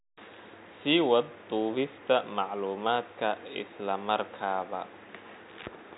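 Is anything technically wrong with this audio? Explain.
No, nothing is technically wrong with this audio.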